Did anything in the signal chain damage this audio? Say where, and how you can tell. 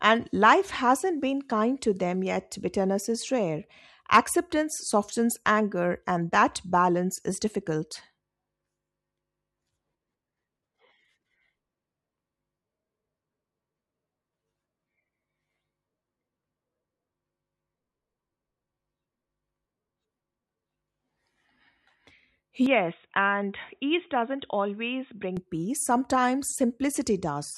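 Yes. From 22.66 to 25.37 s the speech turns dull and boxy, with nothing above 3.8 kHz, about 5 dB quieter, and a new noise floor roughly 50 dB under the signal, then clears again. There is no gap at either edge. This is likely an input switched to a poorer device at the driver or device-selection stage: the system changed microphones in mid-recording, and the substitute's narrower band, different gain and own background noise replaced the original capture until it switched back.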